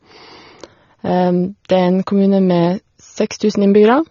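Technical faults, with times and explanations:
Throughout, AAC compression: the speech is dull and smeared, with plainly audible codec damage and nothing above 7.5 kHz, which fits AAC-LC at around 24 kbps. The likely cause is an encoder starved of bits, quantising coarsely, cutting the top band and leaving gaps. Unlike a simple low-pass filter, which only removes treble cleanly, this adds a warbling, fizzy texture on held vowels and sibilants as the coding changes from frame to frame.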